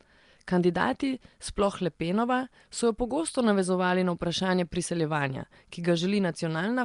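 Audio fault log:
Throughout: likely Nellymoser compression, the old Flash microphone codec. The speech carries a rough, hissy halo and a smeared, underwater blur, with nothing above 10.6 kHz. Weak bands starved of bits are filled with noise, so the hiss is grainy and unlike a steady noise floor.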